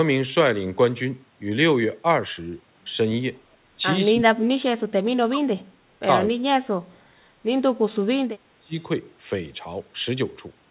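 Speech suppressed in double talk occurs at 4.11–4.62 s, 4.85–5.6 s, 6.31–6.99 s, 7.61–7.96 s and 8.31–8.75 s, where the speech dips by roughly 30–35 dB. The likely cause is the echo canceller mistaking the talker for loudspeaker echo and attenuating both.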